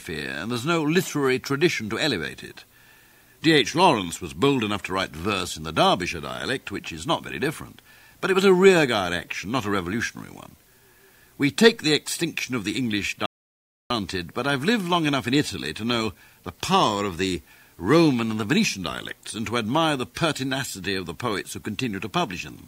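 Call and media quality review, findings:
Audio dropout to silence, 13.26 to 13.90 s: abrupt cut to silence for about 0.64 s, no room tone, then a hard resume. Likely input loss (device or link) while capture kept writing zeros. Unlike gating or concealment, no fade, no residual noise, no smeared fill.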